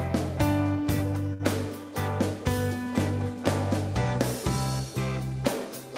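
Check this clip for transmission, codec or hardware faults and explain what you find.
One transmission fault is present. A short stall from a late packet at 1.33 to 1.42 s: the jitter buffer ran dry, so the receiver stretched the last sound for about 62 ms, then resumed without loss, leaving a held moment with a slight buzz or dip.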